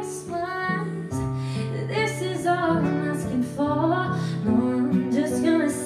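No technical faults can be heard anywhere in the clip.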